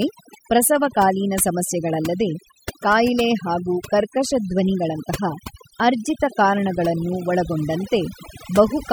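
Throughout, the background sinks to near silence with twinkling specks: overdone noise removal, gating frequency bands near the noise estimate.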